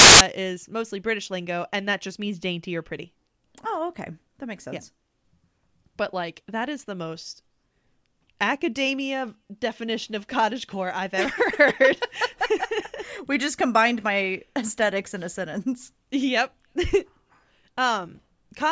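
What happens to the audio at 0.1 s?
At 0.1 s the clip is inside a burst of file tags played as audio, running from 0.0 to 0.21 s. An embedded cover picture, stored as compressed data, is being read as if it were samples, so its near-random bytes come out as very loud white noise with abrupt, hard edges. Unlike clipping or a codec glitch, the noise has nothing to do with the speech. It is a flat, very loud static sitting right at the file's start.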